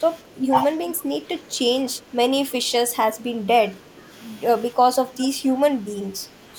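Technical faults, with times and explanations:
0.46–0.54 s, speech suppressed in double talk: the speech dips by roughly 20 dB for about 70 ms, likely an echo canceller turning down this side's speech along with the echo; the waveform shows a short notch.
5.21–5.28 s, echo leak: a faint copy arrives 316 ms late, about 20 dB under the speech, likely loudspeaker echo slipping past cancellation; the spectrogram shows a weak, shifted repeat of earlier harmonics.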